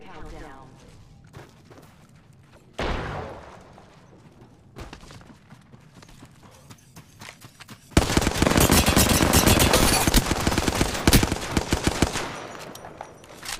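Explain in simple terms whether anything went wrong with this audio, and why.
Nothing went wrong; no faults can be heard.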